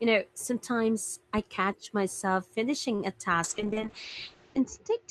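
At 2.95 s the speech briefly freezes: a sound is held for about 39 ms, from 2.95 to 3.01 s, with a slight buzz or dip before it picks up exactly where it left off. Nothing is skipped. This is a short stall from a late packet. The jitter buffer ran dry, so the receiver stretched the last audio until the packet arrived. Playback then resumed 39 ms later than before.

From 3.45 s to the end, the speech turns rough and watery and loses its brightness. The top of the spectrum drops from about 20 kHz to 8 kHz, leaving a muffled, band-limited sound that is coarsest for roughly 1.1 s. This is a call bitrate drop. The bandwidth estimate fell and the encoder was told to spend far fewer bits, consistent with a fall from around 32 kbps to about 7 kbps, so Opus quantised more coarsely and cut the high frequencies.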